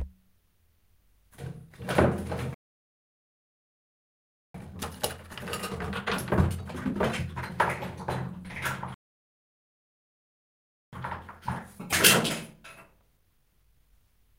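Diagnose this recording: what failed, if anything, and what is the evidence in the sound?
Playback stall at 2.54 to 4.54 s and again at 8.94 to 10.93 s: the sound cuts out mid-flow into silence for about 2 seconds each time, then resumes. At the playback stage, the player most likely starved of data or had its output thread blocked.

Time-compressed catch-up from 4.54 to 7.54 s at 1.5 times speed, and from 10.93 to 13.93 s at 1.1 times: the sound hurries at unchanged pitch as the player trims and cross-fades small slices to work off its backlog.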